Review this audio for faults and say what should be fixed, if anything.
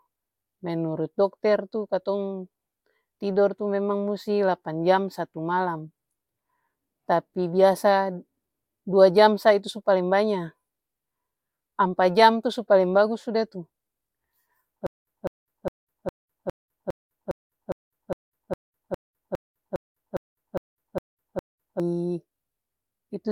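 A stalled player or stream, likely retrying on a starved buffer, causes a stutter with silent gaps from 14.87 to 21.80 s. On each retry it replays the last fragment of about 203 ms and then runs empty for about 205 ms, so the same short burst of speech returns 17 times at a steady period of about 408 ms, with dead digital silence between repeats. The speech that should have filled those seven seconds is lost. Larger buffering with underrun recovery that resumes from the current position, rather than looping stale data, would prevent this.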